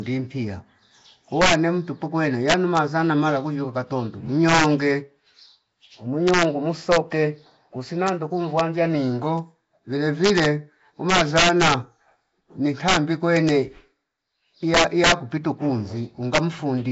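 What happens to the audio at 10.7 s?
At 10.7 s the gain stage is driving the signal about 5 dB past the integer limit, and it has been doing so for the whole recording. Because the arithmetic wraps rather than saturating, any peak that crosses full scale flips to the opposite extreme instead of being held at the top. Only about half a percent of samples go over, so the damage lands on the loudest speech peaks as sudden, violent cracks, far harsher than ordinary clipping.

The same stretch also carries compression damage, most likely from the Nellymoser Asao codec at a rate that fits a 32 kbps stream. Coarse block coding starves the weaker bands, which are then filled with noise. The result is a rough, hissy halo around the speech and a smeared, underwater dullness, and nothing above 7.7 kHz survives.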